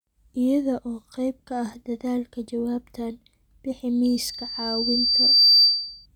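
At 4.04 s, just after "ah dadaalka jawaabtan bixi", a loudspeaker feedback squeal starts and runs to 6.06 s. The microphone is picking up the loudspeaker it feeds, and at about 4.6 kHz the loop gain has gone above unity, so that frequency reinforces itself on each pass. It is heard as a thin, steady tone that swells over roughly a second and a half into a piercing squeal, ending up around 10 dB louder than the speech.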